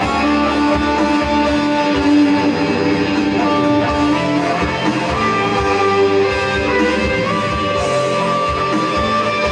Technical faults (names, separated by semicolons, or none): channel delay (comb filtering)